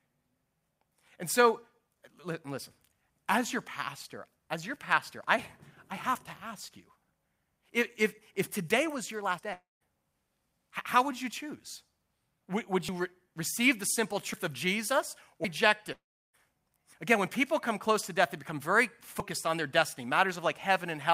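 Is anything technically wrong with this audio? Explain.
Yes. The speech has two kinds of fault.

Dropped buffers (overrun) at 9.39, 12.89, 14.34, 15.45 and 19.2 s: each is a sudden jump forward, losing roughly a tenth of a second, a bit more at 15.45 s. This likely comes from the program reading its input too late, so the hardware overwrote samples and the surrounding audio was spliced together.

Long network dropouts from 9.53 to 9.83 s and from 15.92 to 16.35 s: about 280 ms and 420 ms of audio are gone, likely because packets never arrived. The receiver stretches the last sound into a fading buzz that gives way to silence, and the speech resumes further along.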